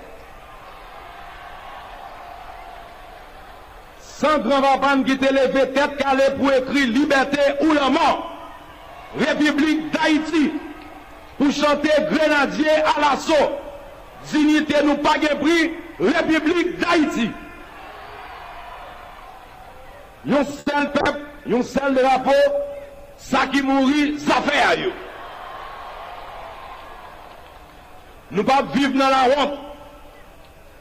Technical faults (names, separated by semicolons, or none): short stall from a late packet; short concealed packet loss; call bitrate drop; jitter buffer speed-up